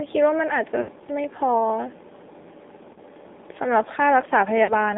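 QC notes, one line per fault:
Throughout, AMR narrowband mobile codec: band stuck at 250 Hz to 3.7 kHz, buzzy and synthetic, which fits a low AMR-NB rate near 7.4 kbps.
0.82–0.90 s, 2.94–2.98 s, 4.64–4.74 s, lost AMR speech frames: gaps of 60, 20 and 40 ms that the decoder filled by repeating the last pitch at falling gain, giving brief warbly dips.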